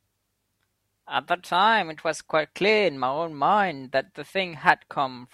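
No technical faults are audible anywhere in the recording.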